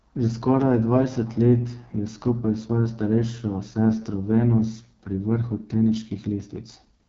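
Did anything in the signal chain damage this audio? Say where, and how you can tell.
Yes. The damage sits at the codec stage: AMR wideband (HD Voice) coding. Throughout the speech the sound is rough and raspy, with nothing above 7.5 kHz. That heavy roughness fits the lowest 6.6 kbit/s mode, where the pulse-driven vocal tract model has too few bits to shape each excitation accurately.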